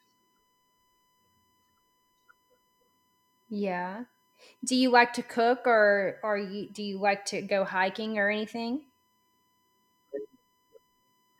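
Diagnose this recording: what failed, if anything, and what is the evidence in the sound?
USB whine, entering at the analogue wiring through shared power or ground: a steady 1 kHz tone runs under the speech for the whole clip, around 45 dB below it. A spectrogram shows an unbroken horizontal line at 1 kHz, from current drawn in the bus's 1 ms frames.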